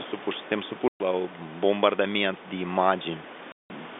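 At 0.63 s, right after "supuși suntem", there's a single sharp click. It's likely a case of dropped samples: a tiny fraction of a millisecond goes missing, so the waveform jumps straight to a later value. The gap is far too short to lose any sound.

Just after that, from 0.88 to 1.0 s, packet loss filled with silence cuts a 120 ms hole before "la un". A second one, 180 ms long, follows from 3.52 to 3.7 s. Both gaps are multiples of 20 ms, which points to 20 ms packets that the receiver replaced with dead silence.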